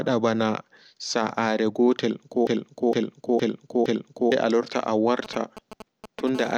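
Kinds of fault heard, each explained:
Broken-record loop: from 2.47 to 4.32 s a 0.46 s fragment repeats exactly, back to back, four times. The sound that belonged in that span never plays. A stalled player, encoder or stream that kept resending its last buffered piece is the likely cause.
GSM signalling bursts: from 5.25 to 6.29 s a galloping pattern of short buzzes at about 217 Hz sits roughly 15 dB under the speech. This is a nearby 2G phone signalling in brief groups of radio bursts, which the audio circuit rectifies.
GSM phone buzz: from 6.35 to 6.53 s a hard, raspy 217 Hz buzz rich in harmonics runs at about 16 dB below the speech, unrelated to it. This is a 2G phone in a call transmitting in bursts 217 times a second, with its pulses rectified into the audio path.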